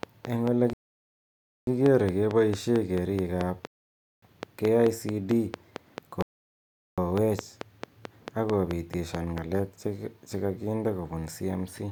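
From 0.03 s to 9.39 s a steady ticking rides over the speech and through its pauses. Same-shaped pulses arrive regularly about 4.5 times a second, some 30 in all, peaking about 15 dB above the speech. This train of clicks is likely interference from nearby equipment or a faulty connection or power supply.

Within that span the speech drops to silence three times: at 0.73 to 1.67 s, 3.67 to 4.22 s and 6.22 to 6.98 s. These gaps last 0.94 s, 0.55 s and 0.75 s, and each time the speech resumes exactly where it stopped. These are rebuffering stalls. The player ran out of downloaded audio and waited for more, which added time without losing any of the sound.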